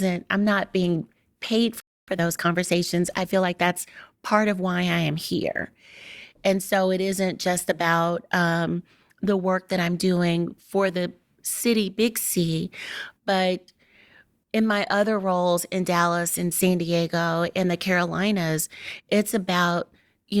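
At 1.80 s the speech cuts out for about 0.27 s, a playback stall. The player likely ran dry of data. It resumes at 2.08 s. From 2.08 to 3.90 s a time-compressed catch-up follows. Small pieces are cut and cross-faded, so speech runs 1.15 times faster at normal pitch.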